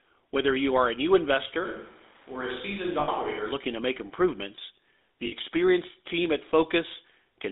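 Throughout, the speech sounds buzzy and gravelly inside a narrow 250 Hz to 3.7 kHz band, the plainly audible damage of the GSM full-rate codec, which fits a 13 kbps stream.

From 1.66 to 3.51 s the voice turns suddenly hollow and roomy, about 5 dB quieter with background noise roughly 25 dB down, likely a switch to a distant microphone.

At 3.00 to 3.09 s and again at 5.26 to 5.33 s, the sound hangs as a short rough, metallic ring. These are lost GSM frames, each patched by repeating the last good frame. The gaps are 80 ms and 60 ms, which fits four and three lost frames.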